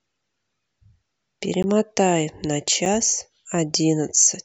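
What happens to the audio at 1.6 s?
A sharp tick cuts into the speech at 1.63 s, a brief hole of about 15 ms where the sound drops out completely and then returns. This is a block of digital silence: a short run of samples has been replaced by silence. The waveform cuts straight out and back with no fade, and at this length the dropout is heard as a single tick rather than an audible gap.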